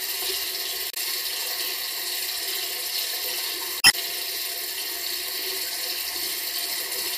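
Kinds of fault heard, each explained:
Damaged data in a compressed stream: corrupted bytes in the encoded file leave the decoder misreading frames and losing sync until it finds the next valid frame header. Here it produces a brief glitch from 0.90 to 0.97 s and a longer one from 3.80 to 3.94 s.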